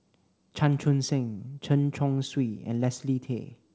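Nothing goes wrong anywhere in this bit of speech; it has simply come through a call path whose top end stops at about 8 kHz, which fits a wideband call codec like G.722.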